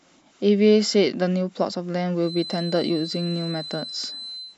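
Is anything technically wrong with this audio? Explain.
Yes. From 2.18 s until the end of the speech clip at 4.57 s there is a feedback whistle: a thin, steady tone at 4 kHz sitting around 15 dB below the speech and swelling and fading slowly in level. The likely cause is a loudspeaker-to-microphone loop held just at the edge of feedback, so one frequency keeps ringing without building up. A spectrogram would show a narrow horizontal line at 4 kHz starting at 2.18 s and running through the speech to the end.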